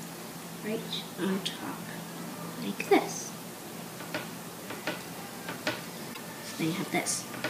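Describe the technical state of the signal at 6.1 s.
A brief glitch cuts through the sound from 6.13 to 6.19 s. This is damaged data in the compressed stream: the decoder misreads corrupted frames, loses sync, and hunts for the next valid frame header.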